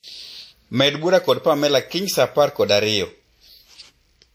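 Speech runs the full clip with two faults present throughout. The file is a 192 kbit/s MP3 with content stopping near 19.7 kHz, yet it carries the coding artefacts of a much leaner encode. This is likely low-bitrate audio saved at a high bitrate, with the character fitting a WMA source near 48 kbit/s that the larger MP3 cannot repair. Sample clock jitter adds a fine hiss and roughness that rises on loud, bright passages and disappears in pauses. Timing wobble of roughly half a microsecond in the converter clock puts an error about 45 dB below the signal, strongest where the waveform changes fastest.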